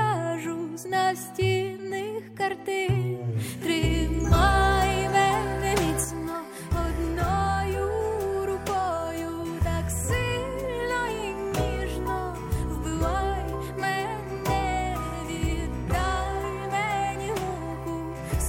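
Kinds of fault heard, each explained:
One channel drops out: from 6.04 s to the end, the level falls abruptly by about 6 dB and stays there, likely because one stereo side went silent before the mono sum. Anything present only on that side vanishes, which separates it from a plain gain drop.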